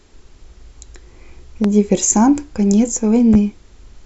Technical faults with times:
1.64-1.68 loud pop
3.34-3.37 loud pop

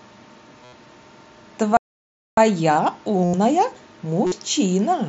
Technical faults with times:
0.63-0.73 concealed Bluetooth headset packet loss
1.77-2.37 playback stall
3.24-3.34 concealed Bluetooth headset packet loss
4.26-4.32 concealed Bluetooth headset packet loss

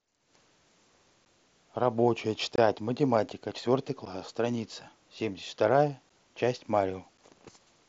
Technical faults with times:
1.25 block of digital silence
2.56-2.58 block of digital silence
4.05 block of digital silence
6.09 block of digital silence
7.17 block of digital silence

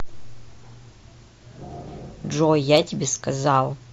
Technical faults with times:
none

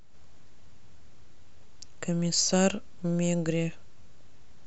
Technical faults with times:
none

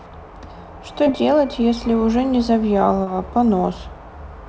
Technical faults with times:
1.04-1.09 short concealed packet loss
3.04-3.10 short concealed packet loss

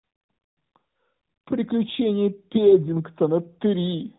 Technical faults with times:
none

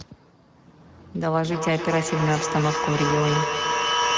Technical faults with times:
0.00-4.17 Speex codec
1.19-4.17 feedback echo between two devices

